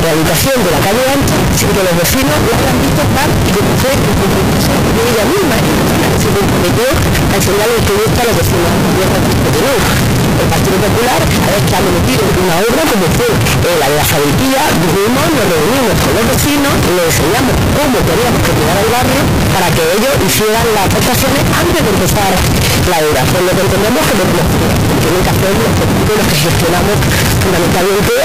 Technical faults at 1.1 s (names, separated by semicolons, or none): float read as integer